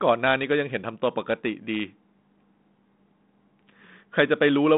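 A speech clip with no technical faults, heard through a 32 kbit/s G.726 telephone path with nothing above about 3.9 kHz.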